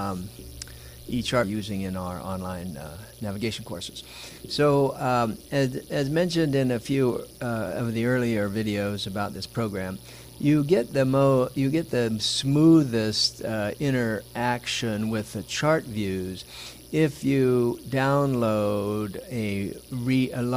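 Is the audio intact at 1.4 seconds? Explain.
No. At 1.43 to 1.45 s there is a skip ahead: about one and a half seconds of audio was discarded, likely by an overflowing jitter buffer, and playback jumps straight to later material with no gap filled. Unlike a dropout, nothing goes silent; the two sides simply butt together.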